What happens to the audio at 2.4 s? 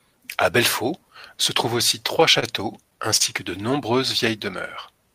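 At 2.40 s the speech briefly hangs: the sound there is drawn out for a moment, with a faint buzzy or slightly dipped quality, until it picks up again at 2.44 s without skipping anything. This is a short stall from a late packet. The packet arrived after it was due, the jitter buffer ran dry, and the receiver stretched the last audio by about 28 ms before resuming from the same point. Nothing is lost, but everything after it plays 28 ms later.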